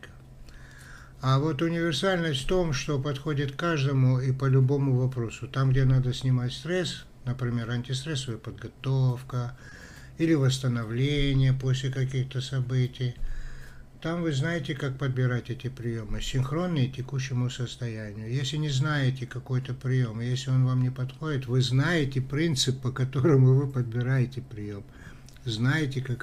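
At 9.69 to 9.73 s, a short concealed packet loss leaves about 20 ms of audio missing, and the receiver fills the gap by extending the preceding sound. It comes across as a brief smear or wobble rather than silence, which distinguishes it from a plain dropout.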